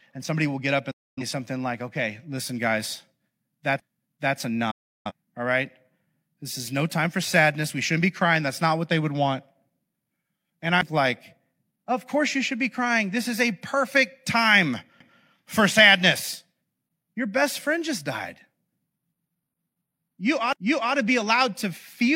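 Speech, with two kinds of fault. Digital broadcast dropouts mute the sound from 0.91 to 1.23 s and from 4.71 to 5.12 s. Each fades out quickly, in about 8 ms. About 256 ms and 341 ms are lost. That points to several failed frames, and the receiver muted until good ones returned. CD skips appear at 3.80, 10.81 and 15.00 s, and from 20.53 to 20.56 s. Each is a brief mute of a few to roughly 40 ms. The laser jumped to another turn of the disc's spiral, so playback resumes from a different point.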